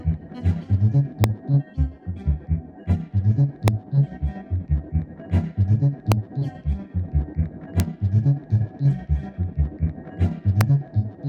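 The audio has integer overflow, heard as five violent cracks at 1.24, 3.68, 6.12, 7.80 and 10.61 s. Loud peaks, with about 0 dB of overdrive, wrapped to the opposite sign instead of being limited. Each shows as a sudden vertical flip in the waveform and a broadband stripe on a spectrogram.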